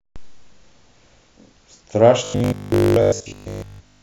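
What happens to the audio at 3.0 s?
At 3.0 s the speech has robotic sound from repeated short buffers, from 2.24 to 4.02 s. A rigid 50 Hz buzz is imposed on it, likely from replaying 20 ms chunks.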